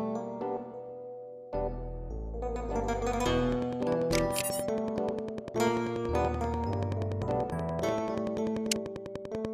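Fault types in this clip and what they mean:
Train of clicks, 3.52 to 9.46 s: a steady ticking of near-identical pulses at a regular 10.3 clicks per second, around seventy in all, sitting on top of the sound and audible through its pauses as well. The peaks rise roughly 10 dB above the surrounding audio. The even spacing and repeated shape point to an outside source, likely interference from nearby equipment or a faulty connection or power supply.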